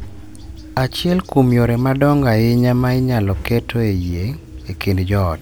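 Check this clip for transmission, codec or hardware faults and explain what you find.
Nothing to report: no fault of any kind can be heard anywhere in the speech.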